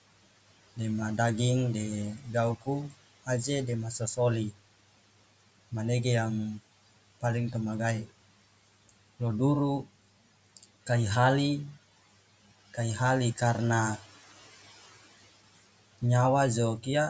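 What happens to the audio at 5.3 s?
Nothing goes wrong at 5.3 s: the speech there is intact, with only the room noise sitting well below it and the usual call microphone processing in the chain.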